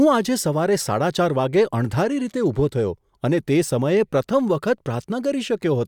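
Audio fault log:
Nothing to log here: the speech has no technical faults anywhere in the clip.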